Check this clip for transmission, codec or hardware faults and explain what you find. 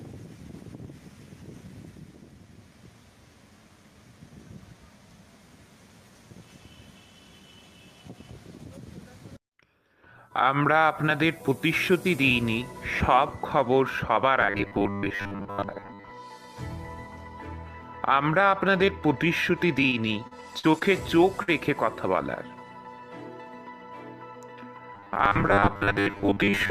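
Three kinds of fault are present: robotic buffer repeats, repeated packet loss and one short loss burst.

From 14.41 to 16.11 s, and again from 24.95 s to the end, there is robotic sound from repeated short buffers. The sound becomes a rigid, metallic buzz at 100 Hz. The likely cause is late audio being patched by replaying the last 10 ms. Most of each stretch is repeated material.

From 19.89 to 20.83 s, repeated packet loss gives a robotic, choppy sound. Five gaps occur, the longest 43 ms. Each is filled by extending the previous sound. About 14% of the span is concealed, and about 140 ms of real audio is lost.

At 21.43 to 21.49 s, a burst of packet loss leaves a brief held, fading patch of 48 ms. The receiver stretched the last sound over the hole. Playback then resumes, with about 40 ms of audio skipped.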